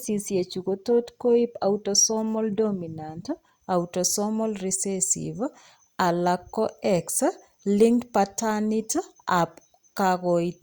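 No technical faults can be heard anywhere in this recording.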